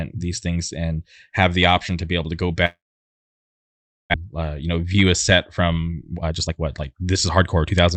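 Packets likely stopped arriving after "be able to go" at 2.65 s, a long network dropout lasting until 4.16 s. The receiver stretched the last sound into a short fading buzz, then left about 1.3 s of near silence. Speech resumes at "uh you" with roughly 1 s lost.

The buffer then held too much audio, so jitter buffer speed-up trimmed pitch periods to catch up. From 4.69 to 5.04 s, just after "uh you", playback runs about 14% fast, shedding roughly 50 ms. From 5.80 to 7.75 s, after "a set", it runs about 20% fast, cutting roughly 0.4 s, so the speech sounds hurried at unchanged pitch over the Opus call path's 8 kHz bandwidth.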